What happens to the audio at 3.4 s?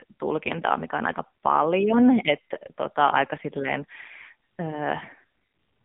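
At 3.4 s the speech carries AMR narrowband mobile codec damage, present throughout. The vocal-tract model, fed with too few pulses (consistent with roughly 6.7 kbps), sounds heavily buzzy and synthetic. A spectrogram shows a 150 Hz to 3.6 kHz band, empty above 3.7 kHz.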